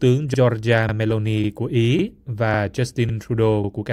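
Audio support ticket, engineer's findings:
Overlapping chunks: 50 ms repeats at 0.34, 0.89, 1.44, 1.99, 2.54, 3.09, 3.64 s. Speech stutters. Chunker replays each 0.5 s chunk's start. Waveform/spectrogram: duplicated slices, seams.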